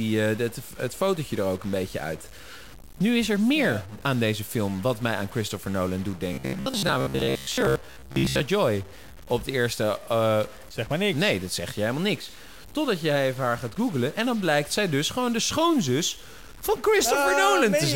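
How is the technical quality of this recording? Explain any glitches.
The recording has two technical faults, one running throughout and one brief.

Throughout the speech there is distortion that likely comes from a stuck bit: one sample bit fixed at a single value, leaving noise in pauses. Unlike broadband hiss, it tracks the waveform.

From 6.33 to 8.40 s there is robotic sound from repeated short buffers: likely about 15 ms chunks replayed most of the time, imposing a rigid 66.7 Hz buzz. Unlike the constant stuck-bit noise, it is confined to this stretch.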